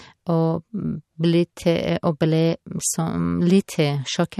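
Likely MP3 compression at a low bitrate, roughly 54 kbps, throughout: treble is cut off above 12.5 kHz, and dropped weak frequency lines leave a watery, swirling texture on the speech.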